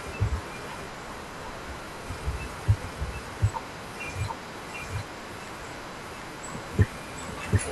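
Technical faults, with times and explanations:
Throughout, doubled audio track: a full-band copy of the speech at roughly equal level trails by about 0.7 s, likely a second capture path. The waveform shows every burst repeated.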